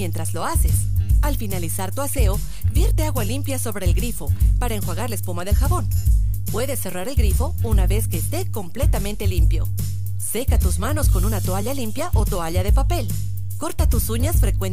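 No technical faults are audible.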